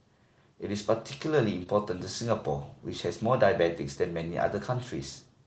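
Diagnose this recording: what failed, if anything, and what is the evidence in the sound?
A brief smear in the speech at 1.63 to 1.68 s, a wobble where the sound stretches instead of moving on, is short concealed packet loss at the network stage. About 20 ms of the stream arrived too late or not at all, and the decoder bridged the gap by extending the preceding sound for roughly 24 ms before crossfading back into the real audio. This happened on a call path consistent with Opus, with content stopping near 8 kHz.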